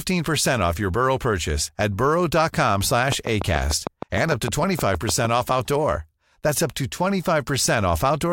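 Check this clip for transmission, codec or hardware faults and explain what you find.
A train of clicks runs from 3.12 to 5.26 s, about fifteen near-identical pulses spaced regularly at 6.6 per second. Some outside source is injecting a short spike into the signal at a steady rate, likely electrical interference from nearby equipment or a faulty connection or power supply. Each click stands well above the speech level, so the effect is a sharp, even ticking laid over the talking that stays just as audible in the pauses between phrases.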